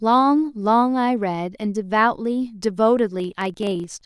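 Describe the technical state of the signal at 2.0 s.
At 2.0 s the audio is intact, with no dropout, clipping, glitch or other fault audible in the speech at that moment.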